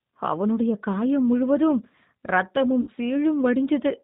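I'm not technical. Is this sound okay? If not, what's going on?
No. Throughout the clip, the G.729 codec, a low-rate phone codec, cuts everything above 4 kHz and makes the speech sound plainly rough, muffled and slightly synthetic.

From 2.81 to 2.90 s, VoIP packet loss concealed by the speech codec: the decoder filled a dropout of about 60 ms by stretching the previous sound and letting it fade.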